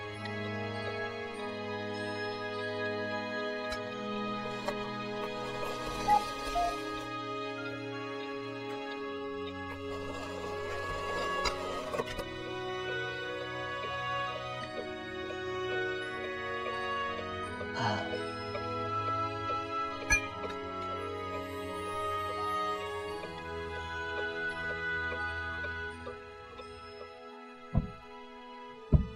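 No technical faults can be heard anywhere in the clip. Nothing in the audio calls for a timestamp or a cause.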